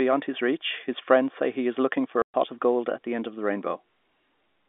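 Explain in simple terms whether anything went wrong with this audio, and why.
Something did go wrong: packet loss filled with silence. At 2.22 s, just after "he is looking for", the speech drops out completely for about 120 ms and returns at 2.34 s with "of gold at the". Pieces of the call never arrived, and the receiver played nothing in their place. The gap's length fits four lost packets. Dead silence rather than smeared or repeated sound sets it apart from a concealed dropout. The narrow telephone-line sound is simply how this kind of call is carried.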